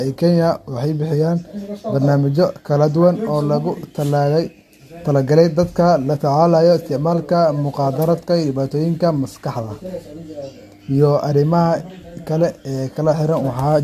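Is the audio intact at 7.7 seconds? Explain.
No, generation loss runs through the whole clip, including 7.7 s. Likely repeated lossy encoding, about three times at a low bitrate, has stacked quantisation noise, leaving swirly, hollow speech with blurred attacks and nothing above 14 kHz.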